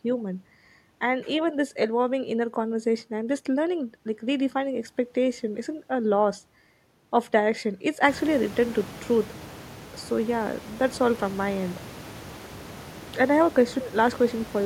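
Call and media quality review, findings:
No faults found; room noise rises around 8 s.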